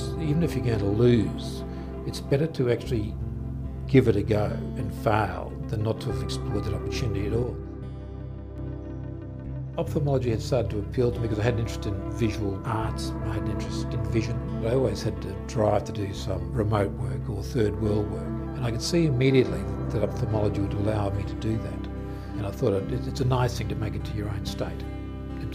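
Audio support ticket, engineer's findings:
Level drops abruptly at 7.43 s, about 4 dB quieter, sound and background noise falling together with no fade. Holds until 8.58 s, then steps back up just as abruptly. Sudden gain jump, likely from a digital gain stage where the setting was applied between one sample and the next with no ramp, so the whole signal, noise floor included, shifted at once.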